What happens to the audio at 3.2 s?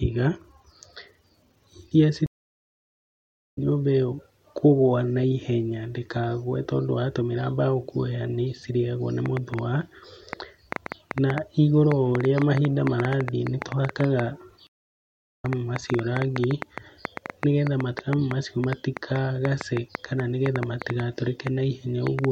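A stream reconnect silences the speech from 2.26 to 3.58 s. The connection dropped and a fresh decoder restarted. Speech resumes roughly 0.7 s further on, at "nyũmba ĩyo kũgwa na".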